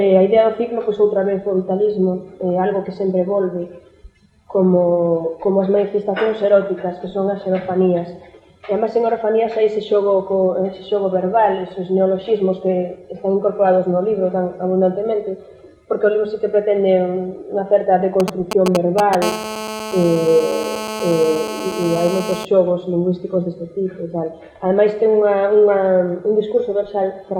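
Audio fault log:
18.20–19.24 s, GSM signalling bursts: a nearby 2G phone's short radio bursts are rectified by the audio circuit, giving galloping ticks and brief 217 Hz buzzes roughly as loud as the audio.
19.24–22.45 s, GSM phone buzz: the phone begins transmitting continuously, 217 times a second, and the rectified pulses become a steady, raspy, harmonic-rich 217 Hz buzz about 9 dB below the audio.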